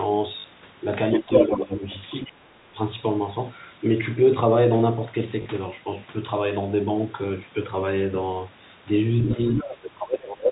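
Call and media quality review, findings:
Packet loss with last packet repeated: two short robotic stutters, 0.40–0.44 s and 5.42–5.46 s, each 40 ms long. A brief 50 Hz-type buzz. Jitter buffer/concealment on the receive side. A 40 ms gap fits two 20 ms packets dropped, with the last good packet replayed out of step with the pitch period.

Other side's voice leaking through: a second voice alongside the talker. 1.13–1.62 s, strong, roughly 5 dB above the talker. 9.24–9.30 s, roughly 10 dB below. 9.58–9.74 s, roughly 15 dB below. Likely the talker's loudspeaker output picked up by the microphone and not fully removed by the echo canceller.

Speech suppressed in double talk: the talker's level dips in pieces. 1.22–1.30 s, about 10 dB down over roughly 70 ms. 1.49–1.87 s, about 15 dB down over roughly 300 ms. 2.27–2.78 s, about 30 dB down, close to a cut-out, over roughly 400 ms. 9.62–10.51 s, about 15 dB down for roughly a second. 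Likely the echo canceller/suppressor failing to separate near-end speech from loudspeaker echo and attenuating both. All of this sits on the narrowband G.711 telephone path, with nothing above 4 kHz.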